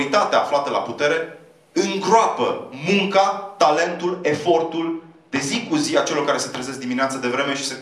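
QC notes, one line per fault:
3.84 to 5.84 s, de-emphasis applied wrongly: for these two seconds the sound turns dull and muffled, as if a blanket were thrown over it, with the top end sagging away before brightness returns at 5.84 s. A treble-cut curve meant to reverse pre-emphasis was applied where none existed or was applied twice, so the response slopes smoothly downward with rising frequency, leaving 10 kHz about 11 dB below the level at 1 kHz.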